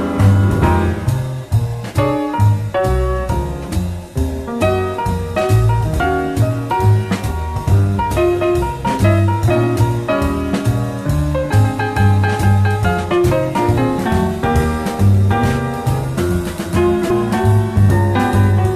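At 9.75 s and 17.09 s, damaged data in the compressed stream makes the decoder misread frames and lose sync, producing a brief chirp or blip.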